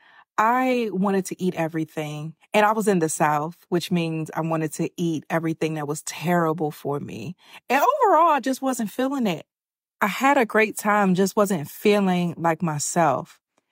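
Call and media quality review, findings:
No faults found in the speech signal; nothing audible points to a problem anywhere in the capture, transport or playback path.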